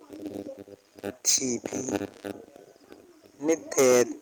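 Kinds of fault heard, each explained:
Hard clipping: speech peaks exceed what a stage can pass and are cut flat, adding high harmonics. Overdriven by about 12 dB and 11 dB, 1.27 to 1.37 s and 3.49 to 4.02 s turn harshly fuzzy. A milder overload gives a brief crackle at 1.95 s.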